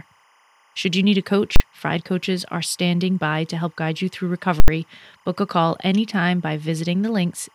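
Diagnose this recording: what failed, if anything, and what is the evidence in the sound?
Timecode bleed in the analogue wiring: 25 fps linear timecode leaks in as a faint, steady chirping warble near 1 and 2 kHz throughout.

Invalid numbers at full scale in processing: blocks pinned to maximum output cause a bang at 1.56 s and loud pops bracketing silence from 4.6 to 4.68 s.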